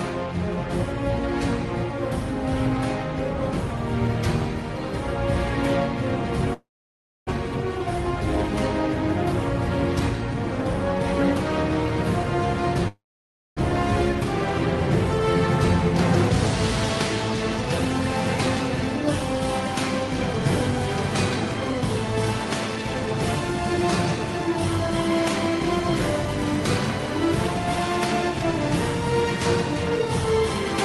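At 6.53 to 7.31 s and again at 12.88 to 13.61 s there is a long network dropout, likely from packets that stopped arriving. Each time the last sound smears into a fading buzz, then drops to silence for about 0.6 s. Roughly 0.6 s of audio is simply gone when it resumes.

From 21.54 to 27.07 s a jitter buffer speed-up trims short pitch-period slices to shed excess delay, about 70 ms in total. Playback runs at 101% speed. Unlike resampling, the pitch stays put and only the timing tightens slightly.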